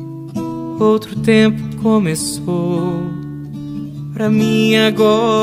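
No technical fault can be heard anywhere in this audio. Nothing in the sound suggests trouble in how it was captured, processed or played back.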